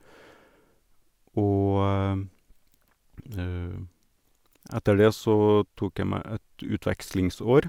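Nothing technical goes wrong anywhere in this bit of speech, so there's no fault to point to at any moment.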